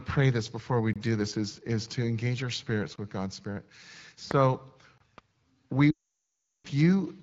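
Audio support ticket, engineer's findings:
Gap between chunks: stream delivered in 2 s chunks with silence inserted at each join. Holes of about 23 ms at 0.93–0.96 s (after "pray this before we", before "this is is to"), 2.96–2.98 s (after "to engage our spirits") and 4.98–5.00 s.

Loud pop: voltage step likely from a plug, switch or driver glitch. Sharp single pop at 4.31–4.33 s, roughly 15 dB above the signal, and another at 5.18–5.20 s, about 20 dB above, with the sound continuing underneath.

Lost AMR speech frames: radio errors caused a run of frames to fail, so the decoder repeated the last good parameters with falling gain. At 5.91–6.67 s, a span of about 740 ms, the sound drops to near silence within two frames, then returns weak or rough.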